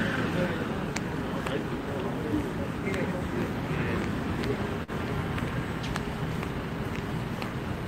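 Short concealed packet loss occurs at 4.83 to 4.91 s. About 40 ms of audio failed to arrive at the decoder in time, so the receiver generated roughly 43 ms of substitute signal, extending the preceding sound from its pitch where it was tonal or as shaped noise where it was not, then crossfading back into the real stream. It is heard as a brief smeared wobble, with the transient detail in that span blurred or missing.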